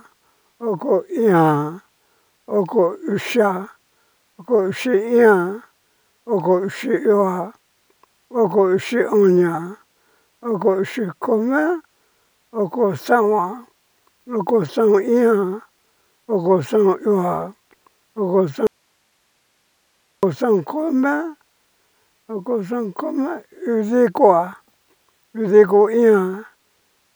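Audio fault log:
18.67–20.23 s, audio dropout to a faint residue: the speech signal was likely lost upstream while the path after the break stayed live, so for 1.56 s the sound cuts abruptly to bare hiss, roughly 45 dB below normal level, then returns mid-flow without any fade.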